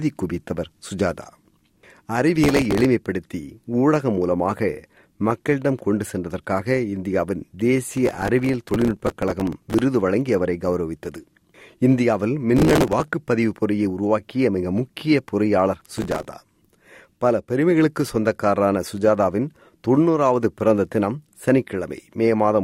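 Processor overload crackle breaks through four times: 2.44 to 2.85 s, 7.91 to 9.80 s, 12.57 to 13.08 s, and 15.80 to 16.25 s. The processor misses run after run of tiny buffer deadlines, which fits buffers of around 3 ms. Each miss replays a stale scrap of audio with hard edges, so the sound tears into a gritty crackle. The longest burst, near 8 to 10 s, holds dozens of misses. On a spectrogram these show as dense vertical broadband streaks, and the waveform shows jagged steps and short repeated slivers.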